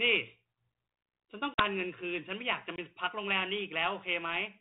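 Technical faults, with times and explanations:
1.54 to 1.64 s, packet loss on an ADPCM call: roughly two packets' worth of speech, about 40 ms, drop out and are filled with silence, so there's a hard-edged hole. The catch with ADPCM is that the decoder tracks its own predictor and step size, and missing those samples knocks it out of step with the sender. So when the speech comes back it lands slightly distorted, then pulls itself back into line over the next few tens of milliseconds.
2.76 s, block of digital silence: a 20 ms block of samples gets replaced by straight zeros, which fits the output buffer not being filled in time. There's no fade in or out, so the waveform drops to nothing and jumps back. At this length it comes across as a short hole, and the 32 kbit/s G.726 coding around it is only lightly marked.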